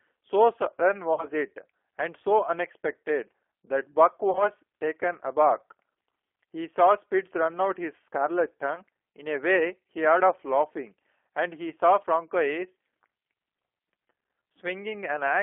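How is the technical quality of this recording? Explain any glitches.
The recording is intelligible but clearly degraded: narrowband codec coloration throughout, plus four brief concealed dropouts.

Throughout, the G.729 codec (G.729A) is plainly audible. It fits 8 kbit/s coding, which rebuilds speech from a filter and a few pulses. The result sounds rough and synthetic. On a spectrogram, energy sits only between 300 Hz and 3.4 kHz.

VoIP packet loss concealed by the speech codec occurs at 1.14–1.26 s (about 40 ms missing), 4.31–4.50 s (about 50 ms scattered over 80 ms), 8.76–8.82 s and 11.70–11.73 s. At each one, the decoder extends its last pitch and filter. This produces a fading buzzy tone or coloured noise, seen as smeared, flattened harmonics and a decaying waveform envelope.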